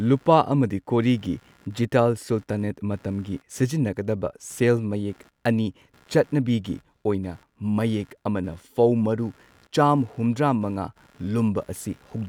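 Computer activity noise throughout: computer load changes shake the shared audio ground, giving a buzz pulsing near 70 Hz, about 35 dB below the speech.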